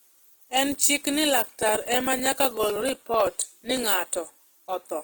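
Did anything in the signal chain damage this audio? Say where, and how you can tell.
Yes. Throughout the speech, tones sound rough and grainy rather than swirly or hollow, while the band still reaches about 20.1 kHz. That texture likely comes from Opus compression in its music mode at a low bitrate, around 16 kbps. An MP3 would leave spectral holes instead.

From 1.56 to 3.84 s, ticks recur every 63 ms, about forty in all, each from roughly a millisecond of audio skipped outright. That strict regularity and tiny size point to periodic USB or driver dropouts at the driver or buffer stage, not random network packet loss.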